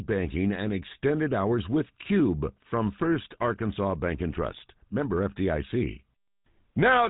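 A GSM full-rate codec runs through the whole speech clip. The codec models the vocal tract and excites it with sparse, regularly spaced pulses, so the speech takes on a buzzy, gravelly roughness. Nothing passes above 3.8 kHz, which fits a 13 kbps GSM full-rate stream.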